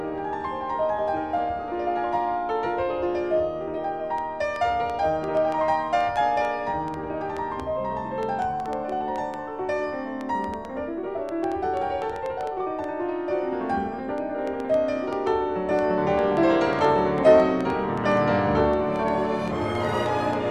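A train of clicks runs from 4.18 s to 20.34 s. The pops arrive at uneven spacing, about 3.9 per second, adding up to around seventy. They look alike and peak a few decibels above the sound. The likely source is electrical interference or a faulty connection or power supply.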